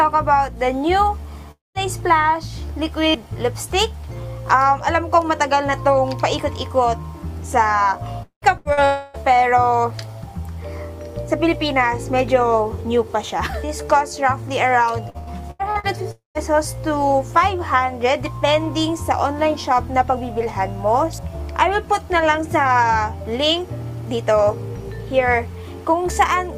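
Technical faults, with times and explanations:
1.51–1.78 s, long network dropout: the sound smears into a fading buzz or hiss, then about 0.18 s of silence. This is likely a dropout, with roughly 0.24 s of audio never played.
8.23–8.45 s, long network dropout: a brief fading continuation, then about 0.11 s of silence. Around 0.2 s of audio is skipped when the sound resumes.
8.58–8.68 s, burst of packet loss: the last sound is held and dies away as a buzz or hiss. About 80 ms of audio is missing before playback picks up.
8.73–8.80 s, short concealed packet loss: a quick smear or wobble where 40 ms went missing. The receiver patched the hole from the preceding sound and blended back.
8.85–9.17 s, long network dropout: a stretched, decaying buzz or hiss with no silent stretch. The receiver likely filled the whole gap by continuing the last sound, and about 0.28 s of audio is lost.
15.10–15.86 s, repeated packet loss (robotic sound): choppy sound. 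Five separate gaps, the longest 86 ms, were each patched by extending the last sound. About 39% of this stretch is filled in, with around 0.28 s missing.
16.11–16.38 s, long network dropout: a fading buzz or hiss, then about 0.15 s of silence. The audio returns further on, with roughly 0.24 s skipped.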